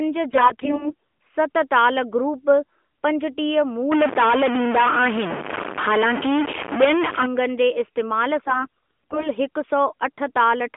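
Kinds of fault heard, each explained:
AMR bit errors: Flipped bits in the weakly protected parts of the mobile codec frames misplace the excitation pulses and skew fine pitch, gain and spectral values, so speech keeps its level but turns hoarse and gargly at 0.30–0.94 s and, more heavily, 8.44–9.28 s. Spectrograms show smeared, ragged harmonics.
Stuck bit: One sample bit frozen at a fixed value, likely from a broken data line or converter, offsets about half the samples, giving distortion from 3.92 to 7.26 s, right after "ताल ग्रुप पंजटीह". Pauses fill with noise. The waveform never settles flat, and spectrograms show broadband haze through gaps.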